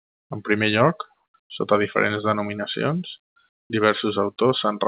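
At 1.14 to 1.34 s, just after "primer lloc", again at 1.42 to 1.50 s (shifted about 8 dB), and at 3.52 to 3.70 s, the faint background becomes steady, featureless hiss: comfort noise in place of the background, likely from discontinuous transmission filling pauses with synthetic noise.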